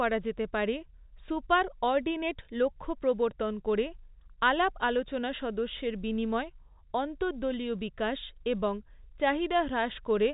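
No technical faults can be heard in the speech, which has the narrow telephone-band sound of G.711 coding, with nothing above 4 kHz, working as that format is meant to.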